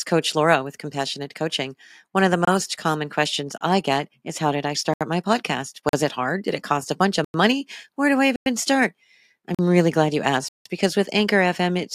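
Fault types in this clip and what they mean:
Block of digital silence: the speech cuts abruptly to dead silence and snaps back, eight times, at 2.45, 3.58, 4.94, 5.89, 7.24, 8.36, 9.55 and 10.48 s. The gaps run from 25 ms to 171 ms, so the shortest are brief dropouts and the longest, at 10.48 s, leaves an audible hole. Blocks of samples were zeroed, likely because the output buffer wasn't filled in time. The 43 ms gaps fit a 2048-sample buffer.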